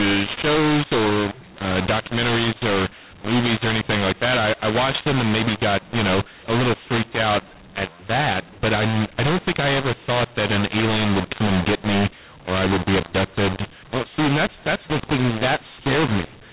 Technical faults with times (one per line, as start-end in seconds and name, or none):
0.00-16.53 mu-law and A-law mixed up